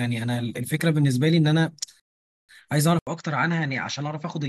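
A short speech recording with two faults. From 2.00 to 2.49 s there is a rebuffering stall. Playback ran dry and halted, adding 489 ms of dead silence before the sound picks up exactly where it left off. The waveform shows a flat line, and the spectrogram shows a blank vertical band. At 2.99 s an 80 ms gap marks what is likely an input switched to a poorer device. Through the end of the clip, nothing reaches above 7.6 kHz, so the spectrogram gets a hard ceiling. The tone turns duller, and the waveform envelope shrinks by roughly 5 dB. A faint new noise floor, about 50 dB down, also appears.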